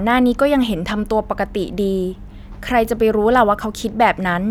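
No technical faults can be heard anywhere in this speech recording.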